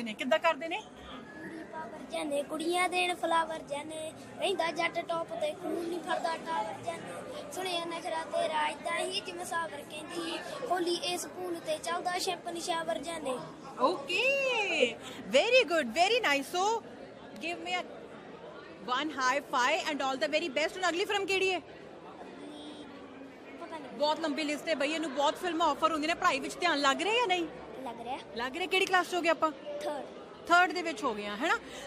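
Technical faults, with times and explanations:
22.83 s, damaged data in a compressed stream: a brief glitch, under 20 ms, where corrupted bytes in the encoded stream leave the decoder unable to read a frame correctly. It loses sync and has to find the next valid frame header before normal playback resumes. On a spectrogram this shows as a thin vertical smear of broadband or oddly banded energy unrelated to the surrounding material; the waveform shows a short, abrupt discontinuity.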